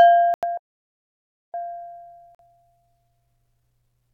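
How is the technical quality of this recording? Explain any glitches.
The recording has clear technical problems: two brief dropouts, one long freeze, and a hurried stretch that runs to the end.

Bluetooth stall, at 0.34 to 0.44 s and again at 2.35 to 2.40 s. The sound drops to silence for 87 ms and then 44 ms before resuming. The likely cause is radio interference delaying packets on the wireless link, so the headphones' small buffer emptied and output paused until the resent data arrived.

Playback stall, from 0.57 to 1.54 s. Here the audio halts mid-flow for about 960 ms, a clearly audible freeze of nearly a second. This likely happened because the player was starved of data or its processing thread was held up, leaving the output silent until it recovered. When the sound returns at 1.54 s it carries on from the point where it stopped.

Time-compressed catch-up, from 1.54 s to the end. 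To make up the backlog left by that freeze, the player runs the audio 1.15 times faster by trimming small slices and cross-fading the joins. The pitch stays normal, but everything sounds rushed.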